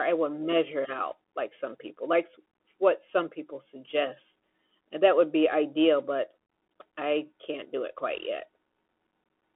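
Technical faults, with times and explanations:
Throughout, Bluetooth CVSD headset codec: the speech is confined to 250 Hz to 3.4 kHz, a flat-topped band on a spectrogram, and the one-bit step coding, which fits a 64 kbps link, adds granular hiss and scratchy s sounds, visible as speckle between harmonics.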